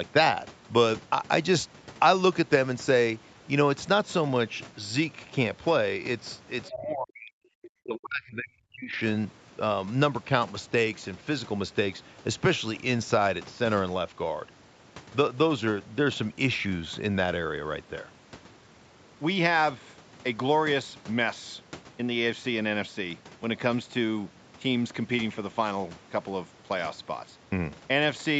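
At 6.65 to 6.73 s, a faint scrap of a second voice is heard, well below the talker. This is likely the other side's voice leaking through an incomplete echo canceller. From 6.7 to 7.42 s and again from 7.66 to 8.94 s, the talker's speech drops deeply. The likely cause is speech suppressed in double talk, with the talker's voice turned down along with the echo.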